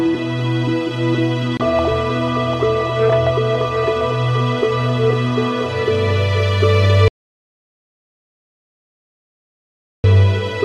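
An audio dropout to silence runs from 7.08 s to 10.04 s, cutting the sound off abruptly mid-flow and bringing it back just as suddenly after nearly 3 seconds. The gap is silent, with no room tone or noise floor beneath it. That points to the input being lost, likely through a disconnected device, a failed link or an accidental mute, while recording carried on writing silence. Whatever occurred during that stretch is gone.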